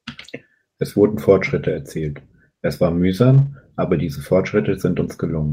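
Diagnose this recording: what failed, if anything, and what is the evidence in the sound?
Network-stage packet loss rebuilt from error correction, 3.33 to 3.47 s: the speech roughens and turns noisy without a gap, about 80 ms of which points to four lost 20 ms packets decoded from low-bitrate copies in following packets. A spectrogram shows smeared, grainier harmonics; the waveform stays continuous.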